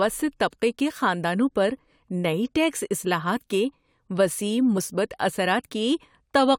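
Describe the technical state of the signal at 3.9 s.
At 3.9 s the speech signal is intact, with no audible technical fault at that moment.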